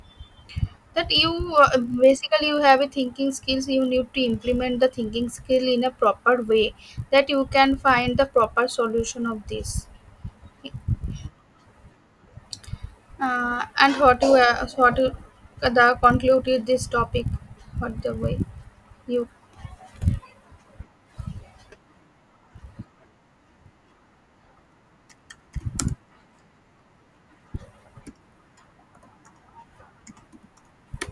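From start to finish, the speech carries a buzz at 50 Hz. It comes from a resampler restarted on every block. Each 20 ms block was converted on its own, consistent with a change from 48 kHz down to 24 kHz. At each block edge, the converter lacked the real neighbouring samples. So every boundary picks up a small error. Fifty such errors a second fuse into a rough buzz. It rides on the voice and drops away in the pauses.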